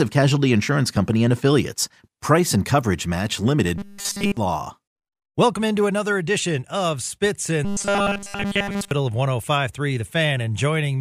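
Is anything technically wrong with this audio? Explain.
Yes. The speech turns into robotic sound from repeated short buffers twice: from 3.78 to 4.37 s, right after "and coverage match limited", and from 7.65 to 8.91 s. Both become a rigid metallic buzz at 200 Hz. The likely cause is a 5 ms chunk replayed over and over while nearly all the real audio is skipped.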